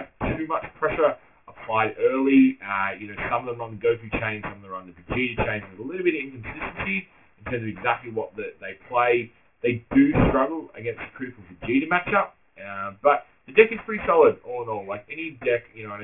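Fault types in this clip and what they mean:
Aliasing: the audio was taken down to a much lower sample rate with no filter first, so everything above the new half-rate folded back down as false, unrelated tones. Here the fold sits at 3 kHz, which fits a 6 kHz rate, and the mirrored content is strong, roughly 10 dB under the real signal. The whole clip sounds gritty and metallic up top, with energy crowding right up to that 3 kHz ceiling.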